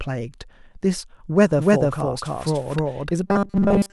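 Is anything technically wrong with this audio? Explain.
Yes, there are two faults.

From 1.43 s to 3.11 s the speech has a doubled audio track: a second, full-band copy trails the original by roughly 0.3 s at about the same level. This is likely a second capture through a slower path or two misaligned copies in an edit, mixed together. It sounds like a hard, dry echo with no reverb tail, switching on and off abruptly. On a waveform each burst reappears as a same-height twin shifted right. On a spectrogram the whole pattern is duplicated a fixed distance later.

From 3.28 s to the end of the clip there is robotic sound from repeated short buffers. The voice becomes a rigid metallic buzz at 200 Hz that still loosely tracks the speech. The likely cause is audio arriving too rarely, so playback loops a short chunk, which fits a 5 ms buffer, while most of the real audio is skipped. A spectrogram shows evenly spaced horizontal harmonics at multiples of 200 Hz replacing natural pitch movement. 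The waveform shows a tightly repeating 5 ms pattern.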